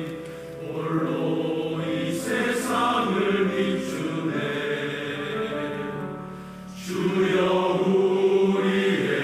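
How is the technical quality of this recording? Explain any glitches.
No technical glitches can be heard anywhere in the recording, and the signal stays steady and intact throughout.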